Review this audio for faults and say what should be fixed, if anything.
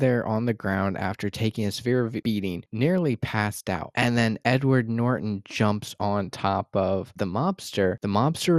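Throughout the speech, coarse sub-band coding likely from MP2 compression switches off upper bands, leaving dull, gurgling granularity consistent with roughly 80 kbps. Encode at a higher bitrate or use a more efficient codec.

From 3.76 to 3.83 s, DAB burbling: residual bit errors corrupt samples and scale factors in a few frames, so single sub-bands jump, giving brief blips of noise. Improve reception or antenna placement so error correction catches these errors.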